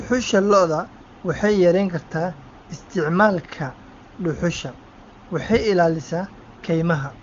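A speech clip with no technical fault to report. It carries the band limit of the AMR wideband (HD Voice) codec, here running at 23.85 kbit/s, so nothing sounds above 7.2 kHz.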